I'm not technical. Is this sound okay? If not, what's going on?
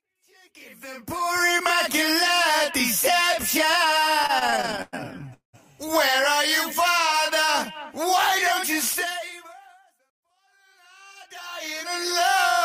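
No. Repeated stalls (stutter), 4.23 to 5.55 s: data arrived late 16 times, so the player stretched the last sound to fill each gap, making it drag.

Jitter buffer speed-up, 9.19 to 10.47 s: to catch up on built-up delay, tiny slices totalling about 70 ms were cut, so the sound runs 5% fast and feels hurried.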